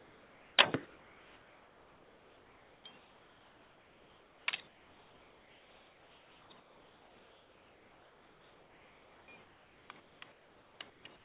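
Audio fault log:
0.00–0.58 s and 0.86–11.24 s, comfort noise in place of the background: the real background gives way to a flat, featureless hiss, about 3 dB quieter at the start, likely because the sender's voice detector stopped transmitting and the receiver synthesised noise to fill the gaps.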